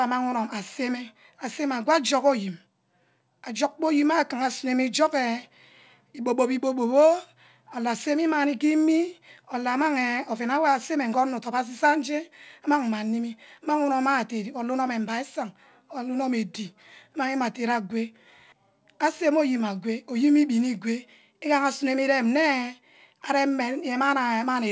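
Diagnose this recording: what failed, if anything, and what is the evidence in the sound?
Nothing failed in this speech recording, and no stage in the chain shows a fault. The audio has passed through a working WebRTC call path, and the sound stops at 8 kHz, which fits a wideband codec such as G.722 at 64 kbps.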